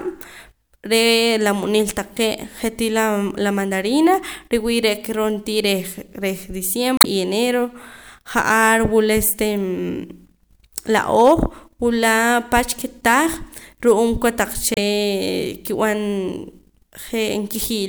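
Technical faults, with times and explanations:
6.97–7.06 s and 14.74–14.78 s: damaged data in a compressed stream. Corrupt bytes made the decoder misread frames and lose sync until it found the next valid header, giving short chirps or squawks. A spectrogram shows brief broadband smears; the waveform shows abrupt, unnatural bursts.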